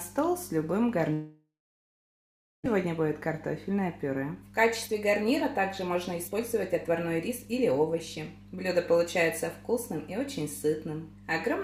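A steady mains hum at 50 Hz runs under the whole recording, about 20 dB below the signal, most likely from a ground loop or nearby transformer. On a spectrogram it is a thin unbroken horizontal line at 50 Hz, with weaker harmonic lines just above. From 1.13 s to 2.68 s the audio breaks off: the last sound is stretched into a fading buzz, then about 1.1 s of near-silence follows before the sound resumes with roughly a second absent. This is likely a long network dropout, with the receiver's delay growing by about half a second. The waveform collapses to a flat line, and the spectrogram shows smeared energy decaying into an empty gap. Between 4.23 s and 8.27 s a jitter buffer speed-up plays the audio at 112% of normal rate without changing pitch, trimming about half a second of backlog by cutting many tiny pitch-period slices. It sounds hurried, and the waveform shows compressed timing with small splice points throughout.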